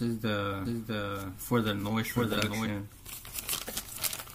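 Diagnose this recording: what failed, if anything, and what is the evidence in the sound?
From 0.65 s to 2.67 s the sound is a doubled audio track: a full-band copy trails by about 0.7 s, roughly 5 dB quieter, with no decay or room colour, and starts and stops abruptly. The likely cause is a second, slower capture path or a misaligned edit mixing in a duplicate.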